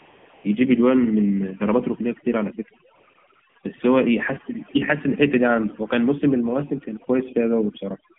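The speech carries overdone noise removal from start to end. Frequency bands near the estimated noise floor are pushed far down, and quiet parts of the voice vanish with them. The background drops and breaks up into twinkling specks.

The AMR narrowband mobile codec also runs throughout. Only a line band of about 150 Hz to 3.4 kHz survives. Damage is plainly audible: the voice is buzzy and synthetic. That points to a low mode, around 7.4 kbps.

AMR comfort noise appears at 0.00 to 0.44 s, 2.96 to 3.14 s, 3.16 to 3.24 s, 3.28 to 3.32 s, 3.34 to 3.42 s and 3.50 to 3.56 s. Speech frames stopped there. A smooth synthetic hiss replaces the real background, switching in and out rapidly around 3 s.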